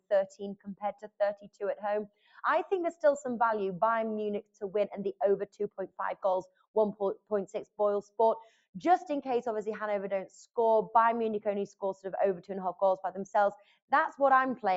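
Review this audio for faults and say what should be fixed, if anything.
Noise suppressor applied to music or sounds, throughout the clip. A noise suppressor built for speech stayed active on this material. It reads steady tones, ambience and reverberation as noise and turns them down. Its gain keeps shifting by roughly 10 dB, so attacks come through at level while sustained parts and tails sink. The result is a pumping, fluttering, thinned-out sound. The Opus call path's top end stops at 8 kHz, which is expected for that route. Prevention: disable speech noise suppression, or use a music mode, whenever non-speech audio is sent.

Sound cut by the noise suppressor, at 0.00–1.61, 2.07–2.34, 4.42–4.63, 5.13–6.76, 7.15–7.32, 7.65–8.78, 11.70–12.06 and 13.57–13.92 s. In these spans the suppressor took the sound itself for noise and pulled it down harder than elsewhere, by about 19 to 21 dB at its deepest. 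Roughly 0.15 to 0.7 s of each span is affected. Held or decaying material drops in level or has its decay cut short, while sudden onsets mostly survive. Prevention: bypass the suppressor for this content so that sustained and fading sounds are never gated.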